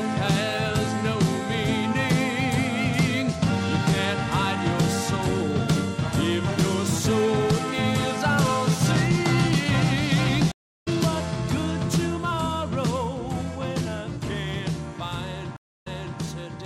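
At 10.52 s a stream reconnect leaves a 320 ms silence. The player restarts its decoder, and the sound resumes roughly a third of a second further on. At 15.56 s another reconnect leaves 280 ms of silence. This time playback resumes 340 ms earlier, repeating a moment already heard.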